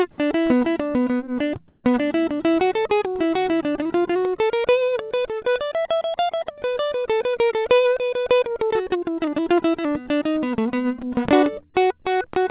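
A music clip, heard through a call path that removes everything above 4 kHz, which fits G.711 mu-law. From 1.68 to 1.84 s, there is comfort noise in place of the background. The quiet background, about 48 dB below the loud passages, becomes a flat, featureless hiss for 160 ms. Its level shifts by about 7 dB. The likely cause is discontinuous transmission: the sender stopped sending, and the receiver filled the gap with synthetic noise. At 1.80 to 1.84 s, the returning sound has its onset clipped by the voice detector. It starts abruptly, missing its first 40 ms. The detector was likely slow to notice the sound, so comfort noise covered that opening.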